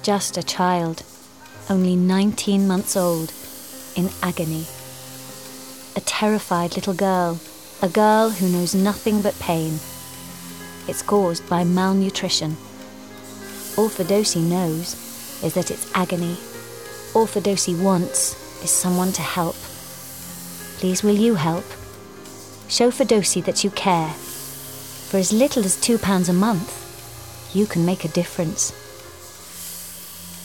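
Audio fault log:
9.83 to 12.72 s, USB whine: a steady whine of fixed pitch at 1 kHz sits roughly 25 dB below the sound, then stops. The USB bus draws current in 1 ms frames, and that regular pulsing leaks through the shared power or ground into the audio as a tone.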